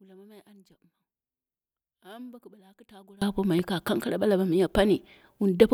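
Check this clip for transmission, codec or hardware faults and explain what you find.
One fault stands out: one channel inverted, from 0.0 to 3.22 s. The likely cause is a polarity flip on one stereo leg, so when the two channels are summed to mono the speech they share cancels. The centred speech drops by about 28 dB, leaving only a faint residue of the difference between channels until 3.22 s, when the level returns abruptly to full strength.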